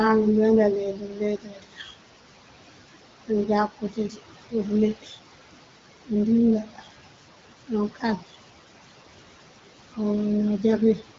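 Noise suppressor artifacts run through the whole clip. The suppressor pulls down the bands it judges to be steady noise by about 17 dB, so the room noise, sitting about 13 dB under the speech, sinks between phrases and swells back under them. Unlike a gate, it works band by band rather than cutting everything at once.

Speech cut by the noise suppressor occurs at 0.93 to 1.94 s (drops of up to about 17 dB over roughly a second), 3.69 to 4.54 s (about 15 dB), 4.95 to 5.16 s (about 10 dB), 6.63 to 6.88 s (about 14 dB) and 7.95 to 8.33 s (about 14 dB). Soft speech sounds are mistaken for noise and swallowed, so they go faint rather than dropping out abruptly the way a lost packet does.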